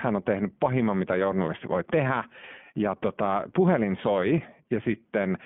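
Speech passed through an iLBC codec, coding each short frame's excitation independently at a rate that fits the 15.2 kbps, 20 ms mode, so the whole clip is confined to roughly 150 Hz to 3.4 kHz and sounds plainly rough and synthetic throughout.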